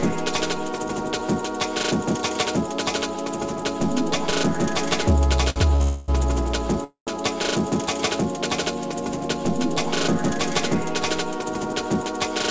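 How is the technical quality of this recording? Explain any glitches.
The recording has clear timing glitches in the middle and near the end, heard through a call path whose codec leaves nothing above 8 kHz.

Two short stalls from a late packet come first, at 5.50 to 5.58 s and 5.76 to 5.82 s. Each time a packet arrived late and the jitter buffer ran dry. The receiver stretched the last bit of sound to cover the wait, 59 ms and then 42 ms. Nothing is lost. The sound just holds a moment too long, with a faint buzz or dip.

Two call audio freezes follow, from 5.82 to 6.10 s and from 6.84 to 7.12 s. The audio stops moving forward and the last sound trails on as a fading buzz or hiss. The first fills 259 ms. The second fills 228 ms and decays into about 110 ms of silence. The likely cause is packets held up in transit, emptying the buffer. When they arrive, playback resumes where it left off, so a gap is inserted and nothing is skipped.

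A jitter buffer speed-up runs from 11.25 to 12.28 s. The buffer was holding more delay than it aims for. To shed it, the receiver trimmed many tiny pitch-period slices in a row, about a tenth of a second in total. Playback runs at 108% speed with the pitch unchanged, so the passage sounds hurried.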